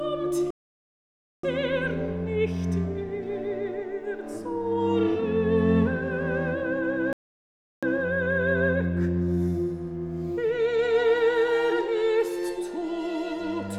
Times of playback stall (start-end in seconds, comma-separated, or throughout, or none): 0.50-1.43, 7.13-7.83